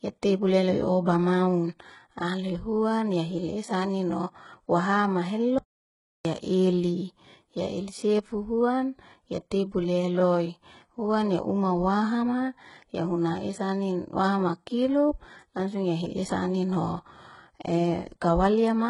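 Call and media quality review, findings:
HE-AAC compression, throughout: heavy codec damage, sibilants gritty and metallic, nothing above 11.1 kHz. Likely spectral band replication rebuilding treble from copied lower bands, fitting a rate near 12 kbps. Unlike plain lowpass, treble remains but is synthetic.

Audio dropout to silence, 5.58 to 6.25 s: sound cuts out for about 0.67 s, gap fully silent with no room tone, then resumes mid-flow. Likely input lost or muted while recording continued. Unlike packet loss concealment, nothing is filled in.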